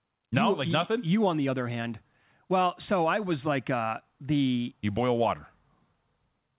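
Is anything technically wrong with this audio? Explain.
No, nothing is wrong: this is speech over a call path whose narrowband sound, with nothing above 4 kHz, fits G.711 mu-law telephone coding working as designed.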